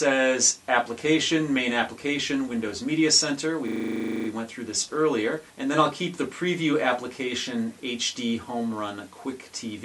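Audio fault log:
3.68–4.28 s, system hang loop: the playback path stalled while the output hardware kept replaying its ring buffer, so a single 40 ms slice repeats exactly 15 times at 25 Hz, which fits a buffer of about 40 ms. The result is a rough, low buzz rather than distinct stutters, and little or no audio seems to be lost once it resumes. On a waveform, identical segments tile end to end. A spectrogram shows a 40 ms vertical pattern copied repeatedly, with energy combed at multiples of 25 Hz.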